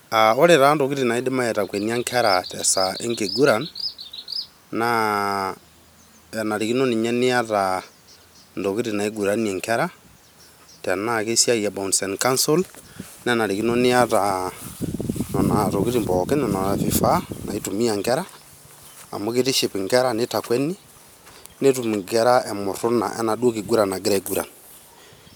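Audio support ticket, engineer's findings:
No faults found on listening to the speech clip. No working path to comment on beyond that.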